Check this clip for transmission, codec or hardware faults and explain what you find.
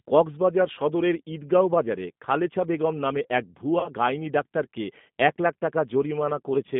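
Two faults are audible, one across the whole recording and one brief dropout.

Throughout, the speech sounds rough and faintly synthetic, with a narrow telephone band running from about 150 Hz to 3.6 kHz. That is the G.729 codec at 8 kbit/s, rebuilding each 10 ms frame from a vocal tract filter, pitch predictor and a few pulses, and its damage is plainly audible.

From 3.80 to 3.90 s, between "খালেছা বেগম নামে এক" and "গাইনি ডাক্তারকে এক লাখ", the sound smears into a fading extension and stays weak briefly afterwards. This is VoIP packet loss concealed by the speech codec: about 30 ms went missing, consistent with a single lost packet, and the decoder extrapolated its last pitch and filter while lowering the gain.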